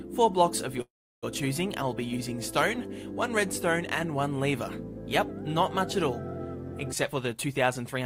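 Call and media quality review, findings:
Call audio freeze, 0.81–1.25 s. Sound stops and a brief continuation of the last sound gives way to about 0.34 s of silence. Likely cause: jitter buffer ran dry while packets were held up. Playback resumes where it stopped, with nothing skipped, so the delay grows by about 0.41 s. This is unlike packet loss, where content would be missing.

Jitter buffer speed-up, 7.08–7.99 s. Audio hurried, about 122% speed, pitch unchanged. Receiver trimming an overfull buffer by cutting short pitch-period pieces repeatedly, roughly 0.2 s removed overall. The steady pitch separates it from a clock or resampling rate error, which would shift pitch with speed.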